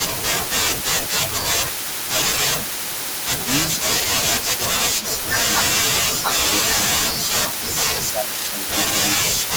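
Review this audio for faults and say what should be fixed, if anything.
Speech suppressed in double talk occurs three times: from 0.12 to 2.75 s, 3.77 to 5.98 s, and 7.6 s to the end. Within each span the voice dips by around 10 dB in pieces, adding up to roughly a second in the first two spans and a bit less in the last. The likely cause is an echo canceller that cannot tell local speech from loudspeaker echo and turns both down. On a waveform these show as sudden envelope notches, and on a spectrogram as vertical gaps where the upper harmonics thin out. To prevent it, use a canceller with proper double-talk detection and gentler residual suppression.

Echo leak runs almost the whole clip, from 0.13 to 9.51 s. A delayed copy of the speech trails it by 410 ms, roughly 15 dB quieter, most likely because the far end's echo canceller did not fully remove what its microphone picked up from the loudspeaker. 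A spectrogram shows faint ghost copies of each syllable's harmonic pattern shifted 410 ms later, and a waveform shows low-level activity filling the pauses after phrases. To prevent it, the far end should use a headset or retune its echo canceller for that loudspeaker path.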